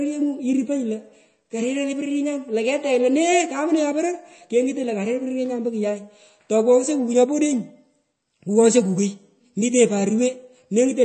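Speech runs throughout with plainly audible MP3 compression damage, likely from a low bitrate around 32 kbps. Nothing sounds above 8.3 kHz, so sibilants lose the top of their hiss, and the remaining band turns watery and swirly. A spectrogram would show a hard ceiling at 8.3 kHz with speckled, flickering gaps below it.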